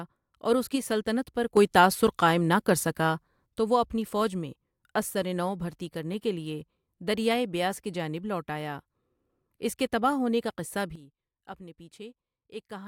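At 1.57 s the level jumps up by about 8 dB in one step and drops back at 3.46 s. At 10.96 s it falls by about 12 dB until the end. Each sudden gain jump lifts or drops speech and background together, likely from a gain setting applied without a ramp.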